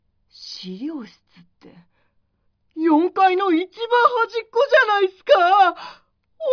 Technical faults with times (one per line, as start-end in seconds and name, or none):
none